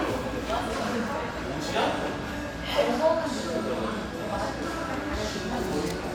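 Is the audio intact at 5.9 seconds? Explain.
Yes, the audio is intact at 5.9 seconds, with no dropout, click, distortion or other fault audible at that moment.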